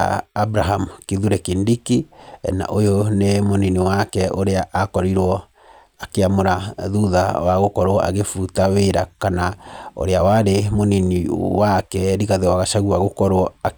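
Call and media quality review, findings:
No audible faults found.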